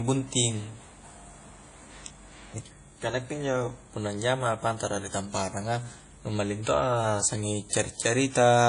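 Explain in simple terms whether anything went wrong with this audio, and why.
The recording was most likely squeezed with WMA compression, an older audio format that saves space by throwing detail away. Throughout the speech, nothing above about 10.1 kHz survives, so it sounds dull and washy, with a ringing hiss that swells and fades along with the talking.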